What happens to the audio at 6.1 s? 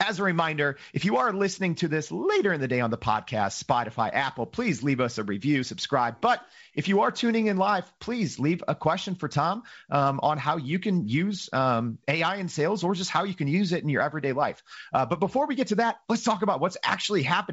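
Nothing goes wrong at 6.1 s; the speech passes through the G.722 wideband telephone coding intact, with the light hiss and the band ending near 7.7 kHz that this coding gives throughout.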